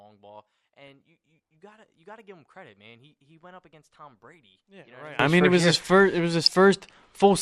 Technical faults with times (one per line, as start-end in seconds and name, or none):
0.00-7.41 MP2 compression
0.00-5.19 one channel inverted
4.59-4.63 DAB burbling
6.43-6.51 DAB burbling